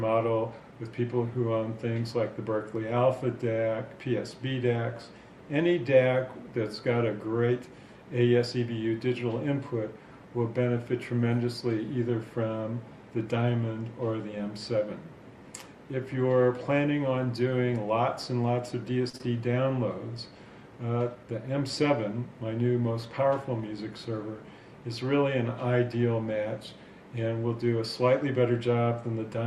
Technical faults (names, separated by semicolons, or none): short stall from a late packet; short concealed packet loss; jitter buffer speed-up